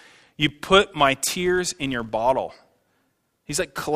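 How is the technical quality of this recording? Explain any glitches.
The quality is affected by one fault running the whole way through. A filter restarted on every block leaves a buzz near 86 Hz, each block opening with a tiny transient, which fits a 512-sample buffer.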